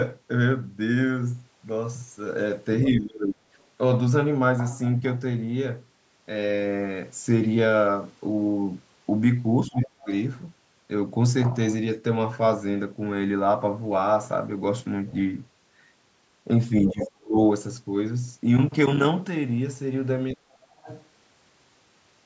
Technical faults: speech suppressed in double talk; other side's voice leaking through

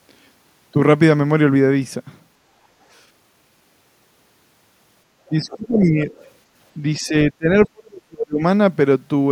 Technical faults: speech suppressed in double talk; other side's voice leaking through

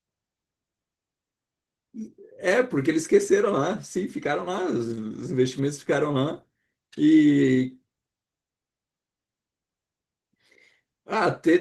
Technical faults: Opus voice compression

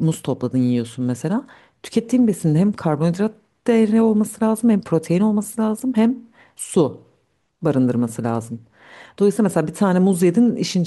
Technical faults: periodic clock jitter

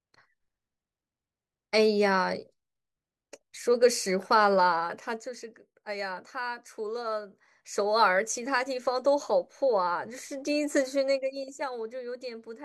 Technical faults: zipper noise

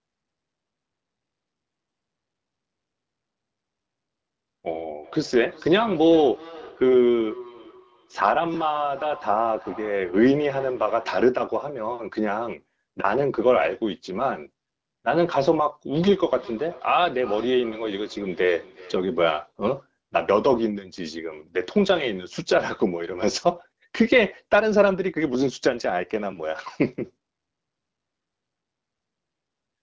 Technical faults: feedback echo between two devices

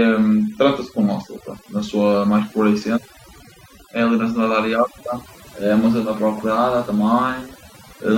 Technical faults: overdone noise removal

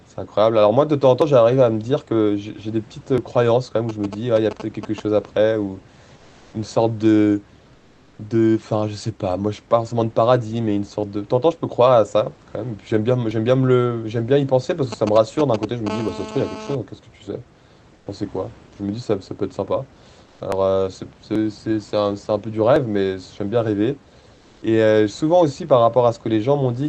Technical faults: dropped buffer (overrun); GSM signalling bursts; comfort noise in place of the background; GSM phone buzz

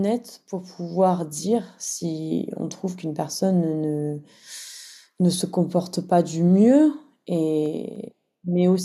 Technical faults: CD scratch ticks

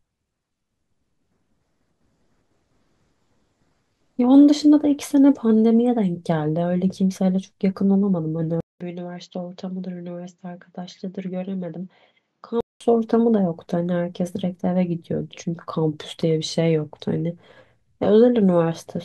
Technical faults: input switched to a poorer device

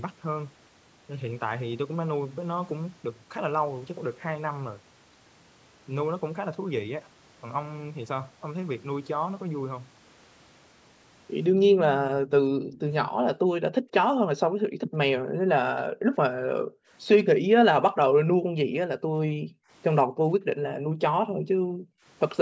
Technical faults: echo leak; background gated by the echo canceller

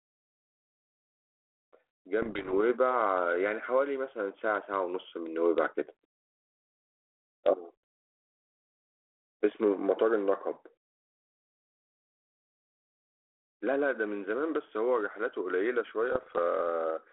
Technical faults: bit errors on an ADPCM link

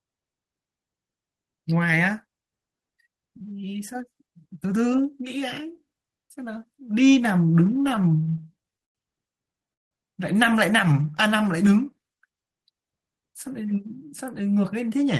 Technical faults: repeated stalls (stutter); jitter buffer slow-down; jitter buffer speed-up

